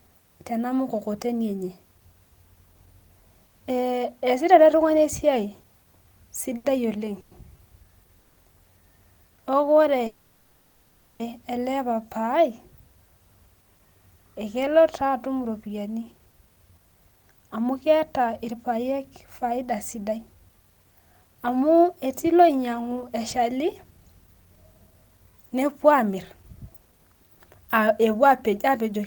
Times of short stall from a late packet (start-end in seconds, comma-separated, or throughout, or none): 6.57-6.66